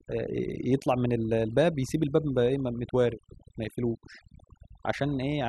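Overdone noise removal runs through the whole speech clip. A noise reduction stage was set far too strong. Wherever a frequency band sat close to its noise estimate, it pulled that band down hard or shut it off. The quieter parts of the voice fell below that line too, so they were cut along with the noise. Between phrases the background drops and breaks up into twinkling specks.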